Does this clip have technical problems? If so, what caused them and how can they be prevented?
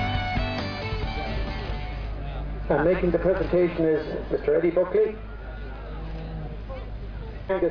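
No, the signal shows no technical faults anywhere in the clip, so there is nothing here that needs preventing.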